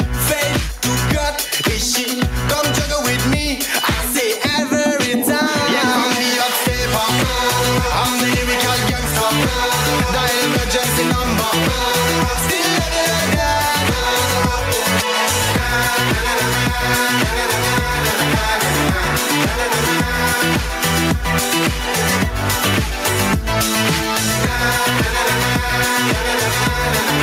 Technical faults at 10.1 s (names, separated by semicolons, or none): gain pumping